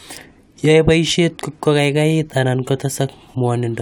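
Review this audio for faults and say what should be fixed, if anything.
No faults; nothing needs fixing.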